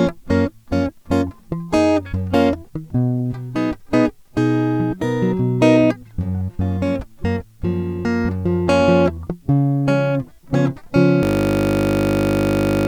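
A system hang loop starts at 11.23 s and runs to the end of the music. The machine stalled while the sound hardware kept replaying one 20 ms buffer, so that short slice repeats at 50 Hz and turns into a flat, steady buzz.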